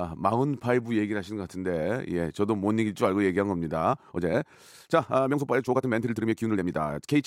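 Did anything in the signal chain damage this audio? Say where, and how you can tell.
Yes. From 3.89 s to the end, the speech runs about 1.59 times faster than before, yet its pitch does not rise. That makes it a time-stretched section, and the damage likely happened in software processing before storage. To squeeze the audio into a shorter length, the stretcher dropped short slices and spliced the remainder together. The cuts leave the pace abruptly rushed. The pitch holds steady across the change.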